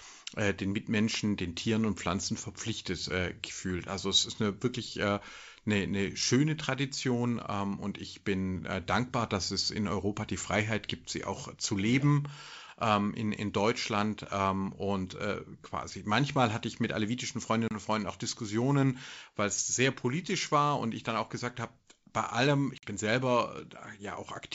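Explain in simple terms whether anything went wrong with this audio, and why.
Two short drops in the speech are packet loss on an ADPCM call, at 17.68 to 17.76 s (about 30 ms missing) and 22.78 to 22.86 s (about 50 ms, a handful of packets). Each is a sudden silent hole, and the voice then returns slightly distorted before settling. Unlike an ordinary gap, the damage continues past the silence because the receiving decoder's running predictions fell out of step with the sender's.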